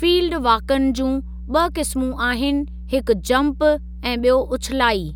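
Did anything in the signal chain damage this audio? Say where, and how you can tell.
Yes. The damage comes from the analogue wiring, before the signal was digitised. A steady low tone at 60 Hz runs under the speech for the whole clip. It sits only about 15 dB below the speech. This is mains hum. A ground loop or a nearby transformer has coupled the 60 Hz power line into the signal path. The constant pitch and level throughout point to that electrical source.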